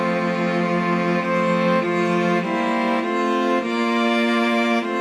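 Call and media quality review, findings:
No transport, capture or processing faults found on this sample; signal chain nominal, no action required.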